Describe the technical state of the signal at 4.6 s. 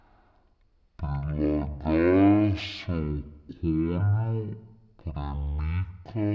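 The speech at 4.6 s is affected by a wrong sample rate, present for the whole clip. The sound points to 44.1 kHz material being played at 16 kHz without conversion, so everything runs at 0.363 times speed and about 17.6 semitones lower. Because pitch and tempo drop together, unlike a pitch shift or a time stretch, the voice sounds deep, slow and dragged.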